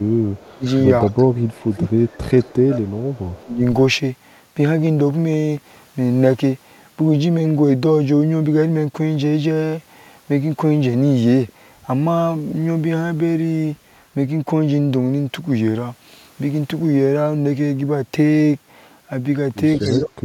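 From 0.0 to 3.61 s the speech dips by up to about 25 dB, about two seconds of it in all. This is speech suppressed in double talk, likely an echo canceller ducking both sides at once. Unlike a dropout, the audio ducks unevenly. Overlapping it, at 0.3–1.78, 2.38–2.45 and 3.15–3.44 s, a faint copy trails the speech by 180 ms at about 30 dB down. That is echo leak, likely from loudspeaker pickup the canceller failed to remove. It is a delayed repeat of the same speech, not reverberant smearing. Both return at 19.8 s: echo leak at about 20 dB down until 20.01 s, and suppression to the end, dipping by about 35 dB over roughly 0.4 s.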